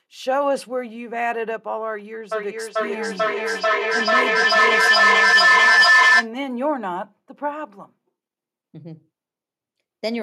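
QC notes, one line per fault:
2.32–6.33 s, feedback howl: a tone near 2 kHz builds up, pulsing roughly every 0.4 s and peaking about 11 dB above the speech. A microphone-to-loudspeaker loop gains level on each pass, so repeats grow and narrow to one favoured frequency until the loop breaks.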